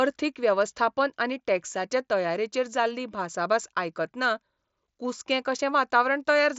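The speech has no technical faults, and its band ends near 7.7 kHz, which fits the wideband mSBC Bluetooth headset codec it passes through, with only that codec's light grain on the louder sounds.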